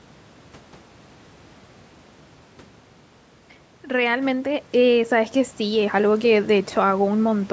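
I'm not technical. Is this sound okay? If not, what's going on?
No. From about 3.87 to 6.39 seconds there is automatic gain rising. Around 2.5 seconds the talker moved and the voice got much quieter at the microphone. The call's volume control noticed and slowly turned itself up. So the voice swells back over those two and a half seconds. The room noise behind it swells too, because the control raises everything it hears, not just the voice.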